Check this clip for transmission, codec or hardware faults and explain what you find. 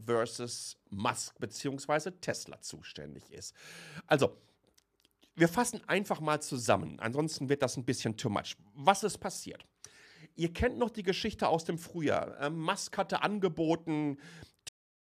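One fault: a cut-off end at 14.69 s. The final buffers were never written out, so the speech stops mid-sound and drops straight to digital silence without any natural decay.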